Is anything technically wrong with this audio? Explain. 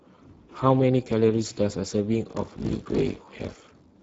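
Yes, two things are wrong.

Speex codec damage runs through the whole clip. The speech sounds hoarse and noisy because this CELP coder is starved of bits for the excitation, which points to a low setting around 10 kbps. Nothing comes through above 7.8 kHz.

Buffer tearing starts at 2.28 s and lasts to the end. The writer and reader of the playback ring buffer have slipped, so roughly half of each buffer replays audio from about 40 ms earlier, with hard joins on both sides. That produces a robotic buzz at 46.9 Hz, which fits a 1024-sample buffer.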